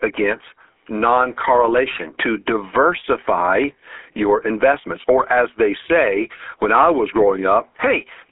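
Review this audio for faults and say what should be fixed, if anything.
The GSM full-rate codec runs through the whole clip: a buzzy, gravelly roughness in the speech, nothing above 3.7 kHz, and a 300 Hz to 3.4 kHz telephone band, which fits a 13 kbps rate. Unlike plain band-limiting, the excitation is rebuilt from regularly spaced pulses, so the roughness sits inside the band. To prevent it, capture the call through a wideband path or a modern codec instead of a legacy GSM network.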